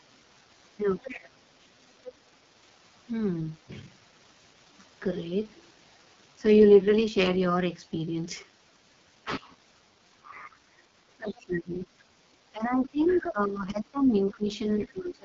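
The call was carried throughout by the AMR wideband (HD Voice) codec at 6.6 kbit/s, its lowest rate. At that rate the pulse-driven model of the vocal tract is starved of bits, so the speech sounds rough and raspy. Nothing is present above 7.5 kHz, and the top of the band is filled with shaped noise rather than real detail.

From 0.98 to 1.13 s, the other side's voice leaks through. The far end is likely being played on the talker's loudspeaker and not fully cancelled, so a faint scrap of a second voice sits about 20 dB below the speech. Overlapping it, from 1.06 to 1.36 s, the speech is suppressed in double talk. With both sides active, the echo canceller likely turned everything down, and the talker dips by up to about 15 dB for roughly a third of a second.

The same suppression returns from 10.23 to 10.85 s with a dip of about 15 dB. It comes back from 11.17 to 11.98 s, where the drop is deeper, about 20 dB. 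From 12.52 s to the end it returns for the longest stretch, about 2 s in total, again dropping around 15 dB. Within that stretch the far voice leaks through twice more, likely for the same reason. The first is a brief fragment at 13.06 to 13.2 s, at about 15 dB below the speech. The second is a longer passage from 14.17 to 14.86 s, at about 20 dB down.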